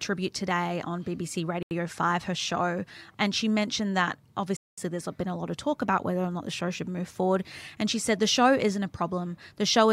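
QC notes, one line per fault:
1.63–1.71 s and 4.57–4.78 s, Bluetooth stall: the speech cuts to dead silence for 82 ms, then a longer 210 ms, before carrying on. That's likely the headphones' buffer running dry while interference-delayed packets got resent.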